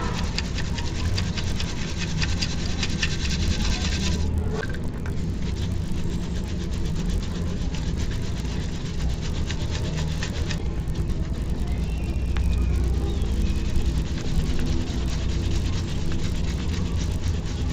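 A 50 Hz buzz runs through the whole audio, consistent with a resampler restarted on every block: 20 ms blocks, apparently converted from 16 kHz to 48 kHz, each leave an edge error. Unlike hum, it vanishes during silence.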